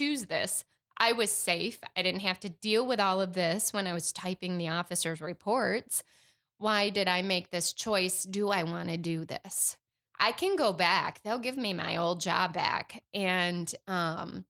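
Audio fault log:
Nothing stood out on listening to the speech.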